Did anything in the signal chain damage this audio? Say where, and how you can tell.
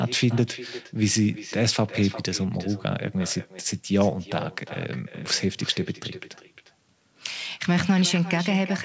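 Yes. The damage is an echo with no canceller, at the call-processing stage on the far end, and it runs through the whole clip. Every phrase of speech returns roughly 0.4 s later as a quieter, thinner copy, about 16 dB below the direct sound. The far side played the call over a loudspeaker, and its microphone caught it. No echo canceller removed it, so it came back across the network. The band stops at 8 kHz, which fits a G.722 wideband call codec.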